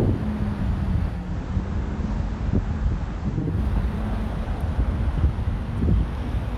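From 1.08 s to 3.6 s the receiver loses its digital signal and shows digital radio blending to analogue: it cross-fades over about 0.28 s to the station's FM broadcast, then back. The level drops by about 2 dB, and a steady hiss rises to sit roughly 35 dB below the signal, clearing once the digital stream returns.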